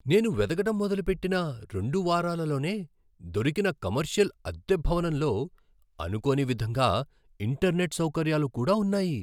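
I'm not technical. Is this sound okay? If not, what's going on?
Yes, nothing in this recording points to a technical fault.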